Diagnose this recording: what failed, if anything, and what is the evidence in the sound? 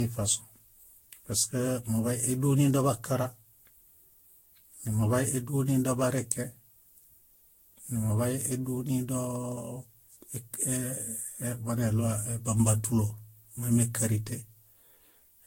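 The failure sits at the codec stage, and it's generation loss. Across the whole speech clip the sound is swirly and hollow, consonant attacks are smeared, and there's nothing above 16.6 kHz. That's more damage than a single encode at around 60 kbit/s would do. It likely went through a lossy codec such as Vorbis about ten times over. Each pass requantises on a shifted frame grid, so the noise and spectral holes keep piling up.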